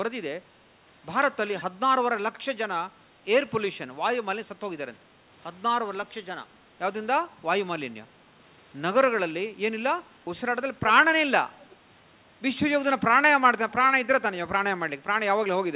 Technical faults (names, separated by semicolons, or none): echo leak